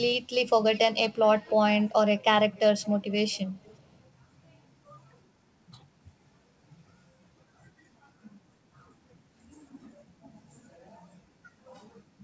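Echo leak at 0.73, 1.12, 1.36–1.54, 2.52, 2.81–3.13, 3.32 and 3.63–3.79 s: faint copies of the speech trail it by 355 ms, likely from a loudspeaker echo canceller leaving residue.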